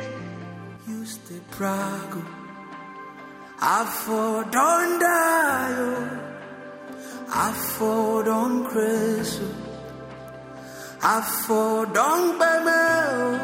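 At 0.77 s there is a sudden gain jump: the sound and its background noise drop together by about 7 dB in a single step, then return at 1.49 s. The likely cause is a digital gain setting applied without a ramp.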